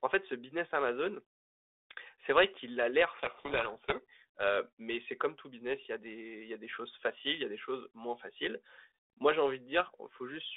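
From 3.14 to 4.01 s the two ends of the G.726 link disagree on the bit order of each code word, a codec payload misread, so the decoder rebuilds the wrong difference values. The speech sinks under harsh, grinding distortion until the packing matches again.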